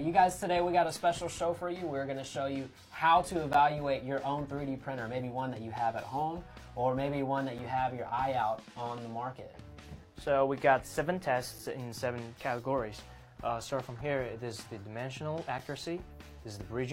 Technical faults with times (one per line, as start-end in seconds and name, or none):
3.53 gap between stream segments
7.58 gap between stream segments
11.58 gap between stream segments
15.58 gap between stream segments